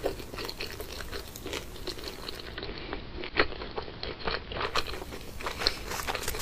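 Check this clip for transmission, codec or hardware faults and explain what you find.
One fault is present. From 2.25 to 4.95 s, digital radio blending to analogue occurs. The receiver lost its digital stream and cross-faded over 0.35 s to the AM broadcast, then back. Hiss rises to roughly 20 dB below the signal, and level shifts about 1 dB.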